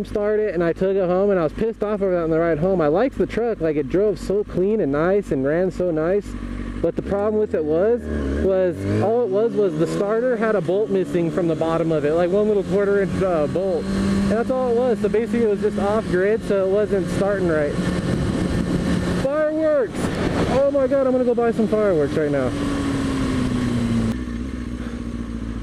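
No technical faults are audible anywhere in the recording.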